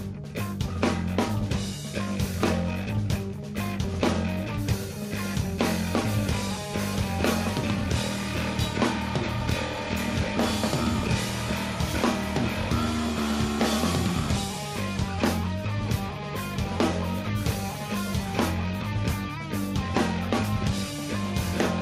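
No audible technical faults anywhere in the audio; nothing to flag.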